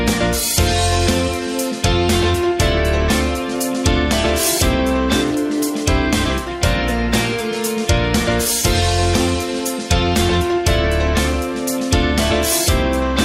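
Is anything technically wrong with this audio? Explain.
No, no technical faults heard.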